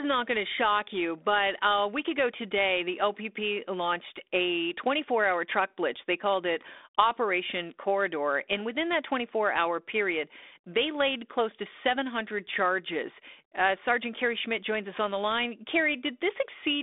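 No faults: the speech comes through a 32 kbit/s G.726 ADPCM link with a 300 Hz to 3.6 kHz telephone band, nothing above 3.8 kHz, and only light coding grain.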